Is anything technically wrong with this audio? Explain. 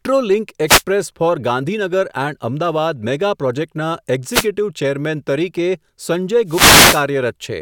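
Yes. Wireless microphone noise hits occur at 0.66–0.83 s, at 4.29–4.47 s just after "અમદાવાદ મેગા પ્રોજેક્ટના", and at 6.46–7.06 s. Each time the FM radio link fades as reflected signals cancel, so receiver noise rises over the speech as a brief swish of static.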